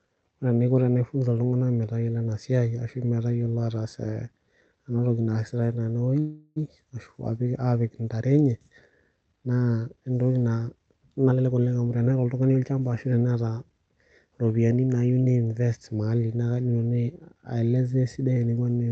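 At 6.19 s a call audio freeze begins and lasts until 6.58 s. The last sound is stretched into a fading buzz for about 0.37 s, likely because delayed packets emptied the jitter buffer. The audio then resumes where it stopped, with nothing lost. On a spectrogram the final frame's harmonics smear horizontally and dim, and the waveform shows a decaying, repetitive stretch.

From 11.30 s to 13.65 s a jitter buffer speed-up plays the audio at about 116% speed with unchanged pitch. Short pitch-period slices totalling about 0.4 s are cut to drain the backlog, so the speech sounds hurried. Syllables appear compressed in time while the harmonic spacing stays the same.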